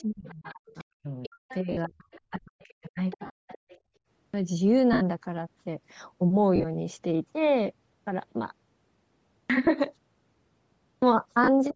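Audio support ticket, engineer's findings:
Bluetooth LC3 compression, throughout: breathy, grainy edge on the speech. Spectrogram shows sparse, patchy upper bands filled with noise rather than harmonics, band ending at 8 kHz. Likely LC3 at low bitrate, which fits roughly 32 kbps with 10 ms frames.

Other side's voice leaking through, 0.0 to 0.84 s, 1.23 to 1.57 s, 2.11 to 2.21 s, 2.61 to 3.79 s: faint second voice under the talker, about 30 dB down in the first stretch, about 20 to 25 dB down later. Spectrogram shows a weak, unrelated harmonic stack. Echo canceller likely leaving residual loudspeaker signal.

Speech suppressed in double talk, 0.02 to 3.5 s: talker dips and drops out in pieces, about 2 s affected in total, deepest cut near 40 dB. Waveform envelope shows notches overlapping the leaked voice. Canceller likely attenuating both sides during double talk.

Lost LE Audio frames at 1.72 to 1.77 s (50 ms), 3.26 to 3.30 s (40 ms), 4.93 to 5.01 s (80 ms), 6.56 to 6.65 s (70 ms in short runs, longest about 40 ms), 9.65 to 9.67 s (20 ms), 11.44 to 11.49 s (40 ms). 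Noisy smear replaces the speech. Spectrogram shows harmonics dissolving into flat noise blocks at 10 ms steps. LC3 decoder concealment repeating the last spectrum with random signs.

Background gated by the echo canceller, 3.82 to 3.94 s: room sound dips about 18 dB for roughly 0.1 s, then returns. Waveform shows a brief hole in the noise floor. The canceller clamped the microphone while the loudspeaker played.

Clipped start after a pause at 4.12 s (0.22 s lost after a 0.58 s pause), 9.32 s (0.18 s lost after 0.81 s), 10.84 s (0.18 s lost after 0.94 s). Speech starts abruptly with missing onsets. Waveform shows a hard edge out of silence with no rise. Output device waking late after the pause.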